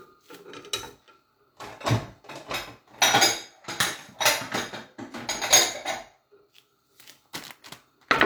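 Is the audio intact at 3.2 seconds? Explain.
Yes, at 3.2 seconds the audio is intact, with no dropout, click, distortion or other fault.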